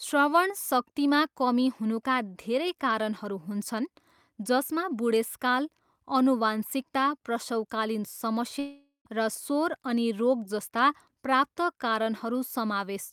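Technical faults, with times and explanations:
8.59 to 9.07 s, long network dropout: the speech cuts out for nearly half a second, and the last sound trails off as a fading buzz before about 100 ms of silence. When the speech returns, that stretch is simply gone, likely because packets stopped arriving.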